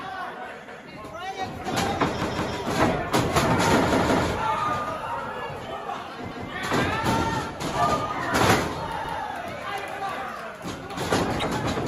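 New audio failed to arrive in time, so the device replayed its last buffer: repeated buffer stutters at 0.68, 2.22 (twice), 3.93 (twice), 6.32 and 9.05 s. Each repeats a 170 ms piece with hard joins, fitting an 8192-sample buffer, and nothing seems skipped. At 11.37–11.44 s, damaged data in the compressed stream makes the decoder lose frame sync, producing a brief disturbance.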